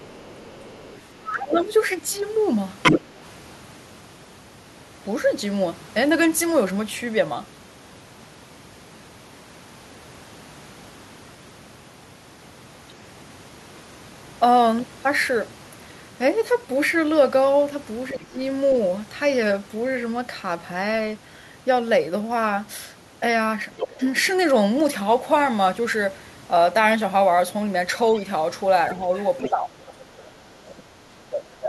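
From 0.0 to 1.64 s the other side's voice is leaking through faintly underneath, likely loudspeaker echo the canceller failed to remove. From 1.18 to 1.7 s speech is suppressed in double talk: the talker drops by about 20 dB, likely as the canceller turns down both voices. Louder leakage follows at 2.83–3.01 s, then suppression at 18.12–18.39 s. Leakage at 23.74–23.87 s runs straight into a short dip at 23.87–23.99 s. The longest suppression covers 29.06–31.68 s, with weaker leakage at 29.16–29.5 s.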